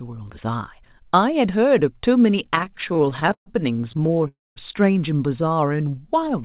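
Speech heard over a narrowband call path, with nothing above 4 kHz, which fits a G.711 telephone codec. From 2.46 to 3.48 s there are repeated stalls (stutter): about twenty brief hangs, the longest 133 ms, where the jitter buffer kept running dry and the last sound was stretched. Roughly 321 ms was filled in and nothing lost, so the sound drags and stumbles rather than breaking off. A milder stretch follows from 3.92 to 4.26 s, with eight tiny hangs of at most 12 ms. At 4.28 to 4.58 s comes a single call audio freeze. The sound holds, fades and then sits silent for about 210 ms before resuming where it stopped. That is one long held gap rather than a chain of short ones, likely caused by packets held up in transit. From 5.37 to 6.26 s a jitter buffer slow-down stretches the sound to about 86% speed, adding 128 ms. The pitch stays unchanged throughout, so it sounds drawn out.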